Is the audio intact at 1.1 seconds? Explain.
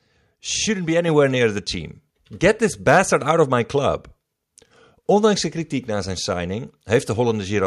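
No. At 1.08 s, just before "near the team", the microphone volume stepped up: the input level was raised in a single step by about 4 dB. Speech and background noise jump together and stay louder, unlike a gradual gain ramp.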